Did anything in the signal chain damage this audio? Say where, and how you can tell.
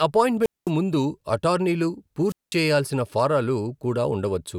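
Yes, a wireless microphone squelch dropout on the radio link: at 0.41–0.71 s, just before "ముందు అటార్నీలు", and 2.27–2.57 s, before "చేయాల్సిన ఫారాలు", hiss swells, then the receiver mutes about 200 ms.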